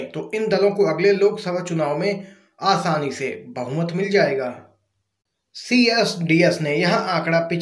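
No technical faults can be heard anywhere in this audio. There is nothing in it that needs a timestamp or a fix.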